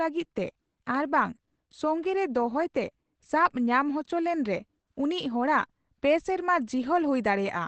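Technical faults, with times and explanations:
Throughout, Opus compression: muffled, hoarse speech with nothing above 8.4 kHz, likely from the encoder's speech mode at a low bitrate, around 12 kbps.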